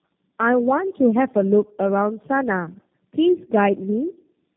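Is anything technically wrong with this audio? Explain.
Yes. Tandem speech coding runs throughout: the speech passed through G.729A, AMR-NB 12.2 kbit/s and G.729A again, three low-rate speech codecs in a row with G.711 links between. Each recoded the previous one's damage, leaving speech rough, muffled and warbly, with nothing above 3.4 kHz.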